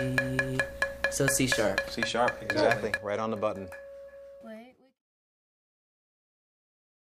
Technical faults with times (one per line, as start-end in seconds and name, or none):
none